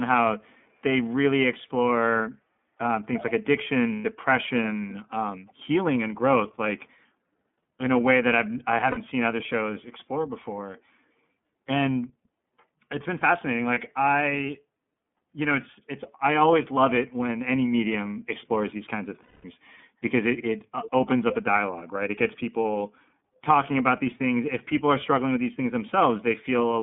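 Speech carried through the iLBC codec, which fits its 13.33 kbps, 30 ms frame mode; the line is cut to 150 Hz–3.5 kHz, leaving the voice muffled and plainly rough and synthetic. A far-end echo canceller likely failed to remove loudspeaker pickup, so an echo leak returns a delayed copy, about 345 ms late at 3.16–3.24 s and 5.47–5.53 s, then about 331 ms late at 20.36–20.43 s, 20.83–21.10 s and 21.29–21.35 s, mostly faint but clearest near 21.3 s. Lost iLBC frames make the decoder repeat the last pitch cycle with noise, giving a brief buzzy held vowel at 3.93 s (120 ms), 8.91 s (60 ms), 13.74 s (30 ms) and 19.23 s (210 ms), with the voice recovering almost immediately after each.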